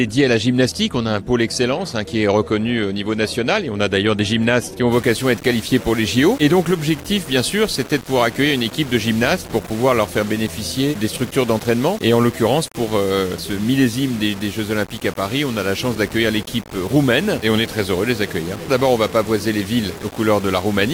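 From 4.92 s to the end, the sound turns grainy and gritty, a rough distortion that rises and falls with the signal, sitting only about 20 dB beneath it. The likely cause is low bit depth without dither: the samples were rounded to roughly 5 bits.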